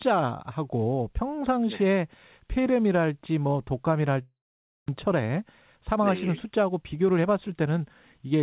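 Long network dropout, 4.22 to 4.90 s: the speech turns into a fading buzz, then about 0.52 s of silence, and resumes with roughly 0.4 s missing. This is likely a stretch of lost packets, which the receiver concealed before giving up and waiting.

Jitter buffer speed-up, 5.07 to 8.28 s: after the gap, the delayed audio piled up in the buffer. The receiver trimmed short pitch-period slices repeatedly, removing around 0.2 s in total. The speech runs about 7 percent fast at unchanged pitch and sounds slightly hurried.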